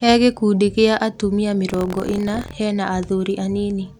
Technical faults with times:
1.67-2.54 buffer tearing

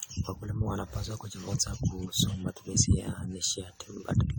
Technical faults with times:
0.00-4.39 generation loss

